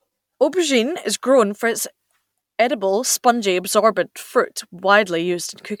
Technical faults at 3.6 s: none

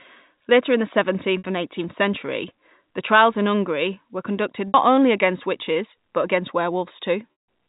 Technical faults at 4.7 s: packet loss with pitch repetition

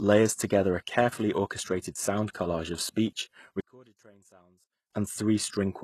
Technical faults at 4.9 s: HE-AAC compression; one channel inverted

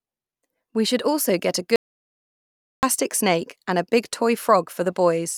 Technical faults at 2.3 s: audio dropout to silence

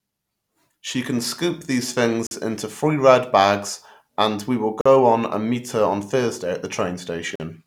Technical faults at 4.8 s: gap between chunks

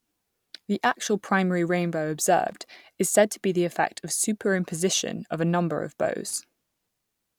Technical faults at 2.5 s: loose connector crackle

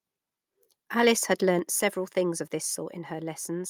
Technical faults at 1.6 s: microphone volume stepped down

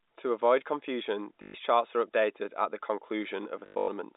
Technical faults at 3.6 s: packet loss with last packet repeated

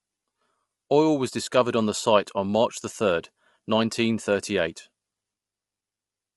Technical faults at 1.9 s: low-delay AAC compression

